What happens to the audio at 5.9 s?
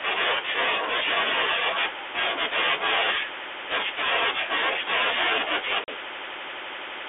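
Packet loss on an ADPCM call strikes at 5.84 to 5.89 s. About 40 ms of audio, around two packets, never arrives and is filled with silence, leaving a hard-edged hole. The decoder's adaptive predictor and step size then disagree with the sender's, so speech resumes at the wrong level or with a click and some distortion before settling within some tens of milliseconds.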